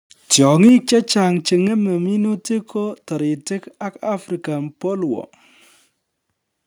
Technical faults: microphone overload; microphone volume stepped down

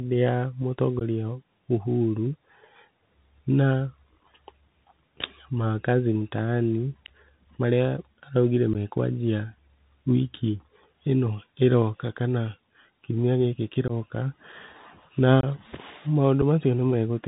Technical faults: Bluetooth CVSD headset codec; unconcealed Bluetooth headset packet loss

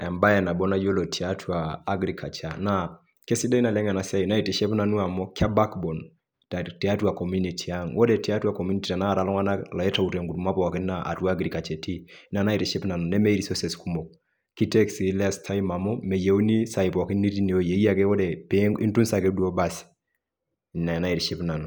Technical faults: none

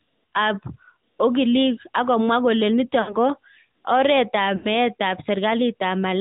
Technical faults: AMR narrowband mobile codec; lost AMR speech frames

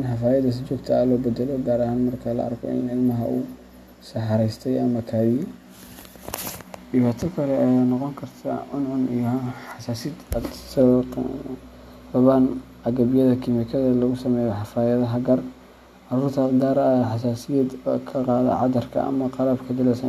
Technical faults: none

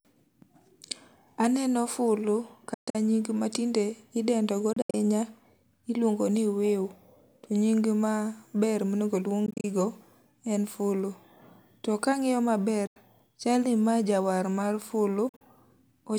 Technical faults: Bluetooth dropout

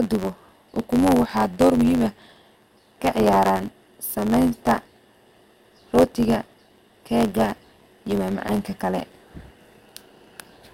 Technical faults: block size mismatch (truncated)

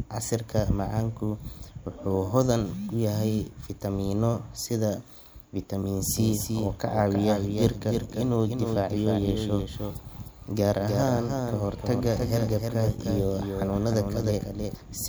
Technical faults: doubled audio track

